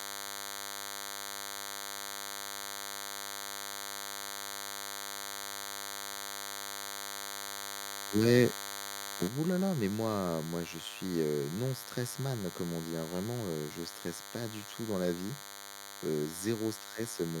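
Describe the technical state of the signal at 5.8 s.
At 5.8 s, DECT cordless phone buzz runs under the speech, as it does throughout. Rectified 100 Hz radio bursts give a thin, harmonic-rich buzz roughly 15 dB down.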